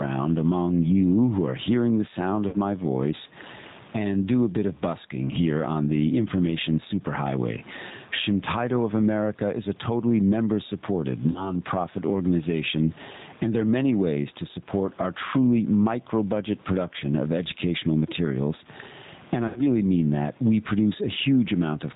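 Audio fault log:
throughout, gain pumping: the gain swings around 15 dB, pulled down on every loud sound, likely from excessive input gain with a fast limiter; the waveform envelope looks flattened and breathing.
throughout, G.729 codec: plainly audible rough, synthetic speech from low-bitrate 8 kbit/s model-based coding; the spectrogram shows nothing above 4 kHz.
2.49–2.56 s (after "are hearing the sound", before "my voice"), 11.31–11.55 s (after "a totally member supported", before "organization and there are"), 19.48–19.61 s (after "and I", before "mean that"), VoIP packet loss concealed by the speech codec: about 40 ms, 40 ms and 80 ms of audio were lost. The decoder stretches its last pitch and filter into a fading sound, and weakened speech continues briefly afterwards.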